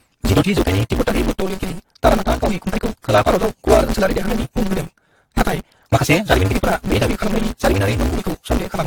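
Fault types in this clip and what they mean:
Block size mismatch (truncated), throughout: block ends are dropped, giving a 188 Hz buzz and speech running 1.88 times fast at near-normal pitch, fitting 256-sample reads.
Generation loss, throughout: smeared, swirly, hollow speech with blurred attacks and nothing above 19.4 kHz, likely from around ten repeated lossy encodes at an AAC-like bitrate.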